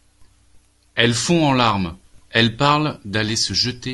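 A speech recording with no technical faults audible anywhere in the signal.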